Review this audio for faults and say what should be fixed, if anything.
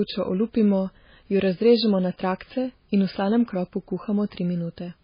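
The speech is heavily damaged from start to finish, with nothing above 5 kHz and a watery, swirling texture on sibilants and consonant onsets. The likely cause is MP3 compression at a very low bitrate, around 16 kbps. Starved of bits, the encoder cuts off the treble and drops weaker frequency lines that flicker in and out between frames. A plain low-pass filter would dull the sound without that swirl. To prevent it, encode at a much higher bitrate or keep a lossless master.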